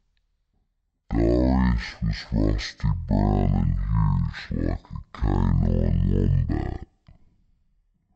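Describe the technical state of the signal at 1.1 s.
At 1.1 s you're hearing the stereo-read-as-mono problem, and it runs the whole length of the clip, not just that moment. The left and right samples are being played back one after another as if they were a single channel, so the speech plays at half speed, drawn out and an octave low. There's also a fainter mirrored copy of the sound sitting up in the top half of the spectrum.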